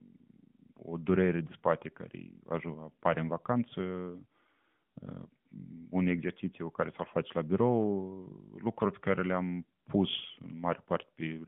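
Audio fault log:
No faults logged; the speech sits within a narrowband mobile channel of about 150 Hz to 3.5 kHz, as an AMR narrowband link passes it.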